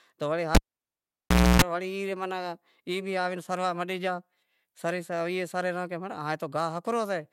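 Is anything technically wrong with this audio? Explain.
Yes. There is a cable pulled and plugged in fault from 0.55 s to 1.62 s, right after "تو وڑے". A live lead was yanked out and pushed back while the signal was running. A pop marks the break, then the speech drops to near silence for about 1.02 s. As the plug goes back in, the tip touches before the sleeve grounds, letting in a 0.29 s burst of 60 Hz mains buzz. A second pop follows as the speech returns.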